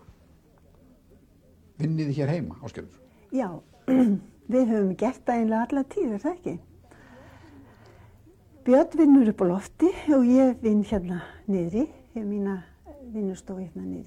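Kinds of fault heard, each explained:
No technical faults can be heard in this audio. There is nothing here to list or explain.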